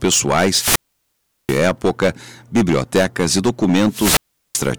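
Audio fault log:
Audio fault log:
Throughout: hard clipping. The speech is driven about 22 dB past what the stage can pass, so roughly 7 percent of samples are sliced flat, giving a harsh fuzz on every loud syllable. The waveform shows squared-off plateaus, and the spectrogram shows smeared harmonics reaching high.
0.48–1.63 s and 3.88–4.71 s: wireless microphone squelch dropout. The radio link fades, hiss swells, then the receiver's squelch mutes the output for about 735 ms and 383 ms, the second hole coming right after "bibliotecas e". The waveform shows a flat gap and the spectrogram a blank band preceded by broadband static.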